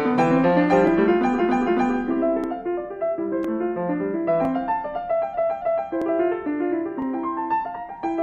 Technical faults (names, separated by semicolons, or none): overlapping chunks; repeated frames